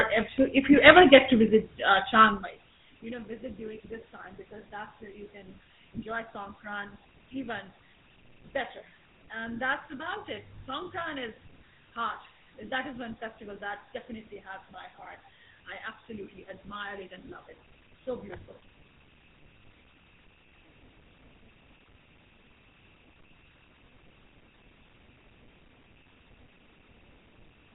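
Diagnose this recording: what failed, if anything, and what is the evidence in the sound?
Codec stage: throughout, the speech stops at 4 kHz with a buzzy, gravelly roughness from pulse-driven excitation, marking the GSM full-rate codec, not just a low-pass filter.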